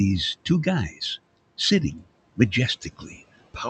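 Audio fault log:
Throughout: noise suppressor artifacts. The suppressor pulls the room noise down by about 21 dB wherever it judges a band to be steady noise, so the background sinks in the gaps and swells back under speech.
0.90–1.01 s and 2.81–3.20 s: speech cut by the noise suppressor. The suppressor mistook quiet speech for noise and turned it down with the background, by up to about 12 dB in the first spot and about 16 dB in the longer second one, so those sounds come across swallowed and faint.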